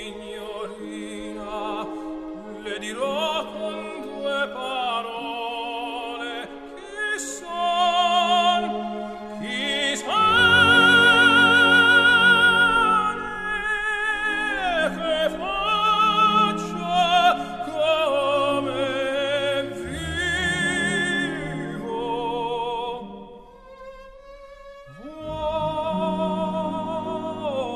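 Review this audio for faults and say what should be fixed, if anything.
Nothing to fix: no faults detected across the clip, and no corrective action is needed.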